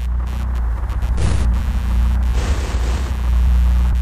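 Throughout the clip, computer activity noise appears: processor, graphics or mouse load shifts the audio circuit's shared ground, adding a pulsing interference at roughly 100 pulses per second, about 25 dB below the sound, that follows the computer's activity rather than the audio.

At 1.58 s and 3.46 s, compressed frames were skipped: frames never reached the output, so the audio jumps ahead, by roughly 30 ms at the first point, which fits one lost frame of 26.1 ms, and by roughly 50 ms at the second, which fits two.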